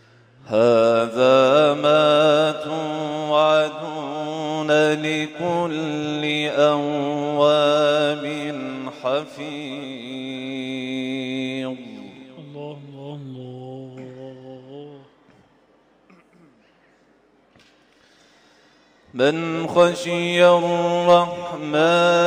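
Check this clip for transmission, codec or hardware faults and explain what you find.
Nothing in the audio points to a fault anywhere along the signal chain.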